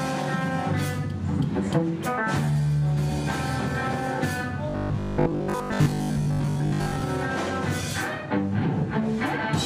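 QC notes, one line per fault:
4.70–7.02 s, robotic sound from repeated short buffers: new audio likely arrived too seldom, so the same short slice was looped to fill the gaps for most of this stretch. Each 20 ms repeat imposes a rigid, metallic 50 Hz buzz over the sound.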